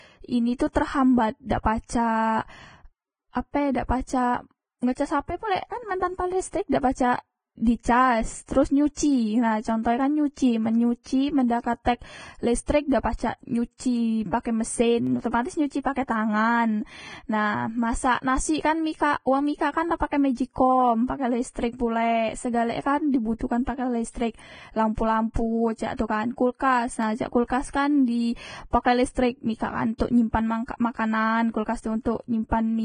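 Throughout the speech, hissy, grainy treble with a lowered cut-off points to heavy Vorbis compression, likely at a bitrate near 20 kbps; fine detail is replaced by noise rather than swirling or ringing. At 4.1, 15.07 and 27.03 s, single sharp clicks mark dropped samples, likely only a tiny fraction of a millisecond each: a waveform jump with no audible gap, unlike a dropout.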